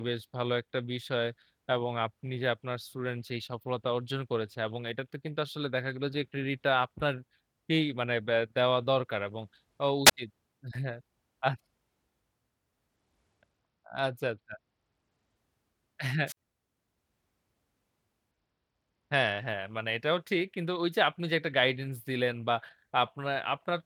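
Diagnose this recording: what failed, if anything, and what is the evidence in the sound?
Wireless microphone squelch dropout, radio link, at 10.05 to 10.11 s and 16.26 to 16.37 s: hiss rises, then muted gaps of 13 ms and 50 ms as the fading signal trips squelch.

Bluetooth SBC bit pool drop, codec stage, at 12.96 to 15.37 s and 18.31 to 19.48 s: the treble dulls and grit rises, which fits congestion forcing the bit pool down to around 13, about 94 kbps.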